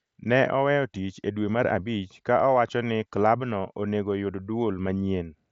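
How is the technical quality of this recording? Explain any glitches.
No glitches or faults can be heard in this speech.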